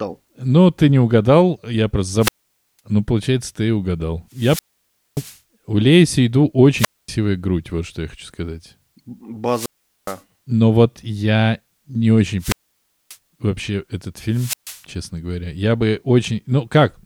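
Wireless microphone squelch dropouts occur at 2.19–2.80 s, 4.32–5.38 s, 6.76–7.09 s, 9.48–10.21 s, 12.39–13.17 s and 14.31–14.82 s. Each time the FM radio link fades, hiss rises, and the receiver's squelch cuts the speech to near silence for 0.14 to 0.58 s before it returns.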